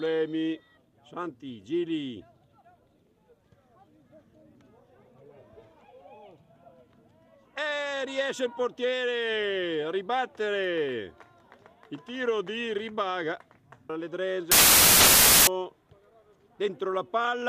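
From 14.52 s to 15.47 s the audio collapses into a burst of loud, harsh broadband noise: samples built from the wrong bytes. The reader misassembles each sample's bytes, so the rapidly fluctuating low-order bits land in the most significant positions. On a spectrogram this appears as a broadband wash; the waveform turns dense and erratic for just under a second.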